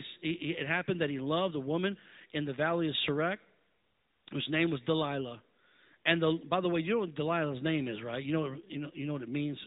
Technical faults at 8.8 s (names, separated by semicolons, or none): AMR narrowband mobile codec